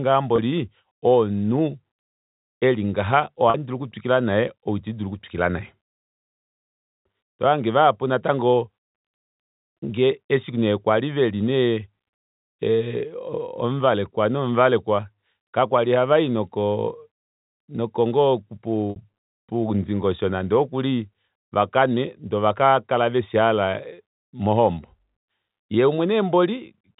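Three short dropouts show packet loss with pitch repetition, at 0.36–0.38 s, 3.5–3.54 s and 18.9–18.96 s, gaps of about 20, 40 and 60 ms, which fits losing one, two and three 20 ms packets. Each time the receiver fills the hole by looping the last pitch period of the speech. The shorter gaps give a brief held, slightly buzzy tone, while the longest, at 18.9 s, fades into silence before the speech returns with a short cross-fade, all riding on the band-limited G.711 telephone sound.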